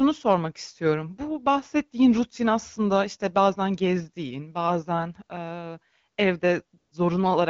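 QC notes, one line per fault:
6.77 to 6.91 s, AMR comfort noise: for about 140 ms near the end, the real background drops out and a smooth, steady hiss fills the gap before the room comes back. The phone judged nobody was talking and stopped sending speech frames, so the far end generated noise from a coarse sketch of level and spectrum. The call around it is clear wideband speech that fits AMR-WB at 12.65 kbit/s.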